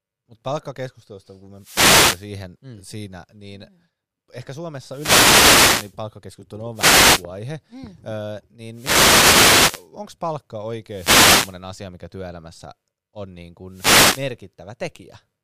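Six wireless microphone noise hits break through the speech: 1.55–2.30 s after "palkkakeskustelusta kun", 4.88–5.97 s after "siinä niin mm ehkä", 6.73–7.25 s, 8.72–9.89 s, 10.88–11.60 s before "asia mikä työelämässä on", and 13.69–14.31 s. Each is a swish of static where the FM radio link fades and receiver noise rises over the voice.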